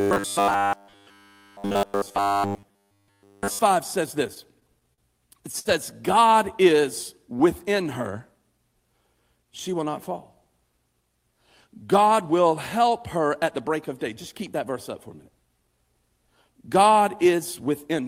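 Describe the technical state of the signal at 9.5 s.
At 9.5 s the speech briefly rushes ahead: from 9.42 to 9.79 s it runs about 9 percent fast while keeping its normal pitch, so that stretch sounds hurried. This is a jitter buffer speed-up. The receiver's buffer had built up more audio than its target, so it trimmed short pitch-period-sized pieces out of the signal in quick succession, removing around 40 ms in total to bring the delay back down.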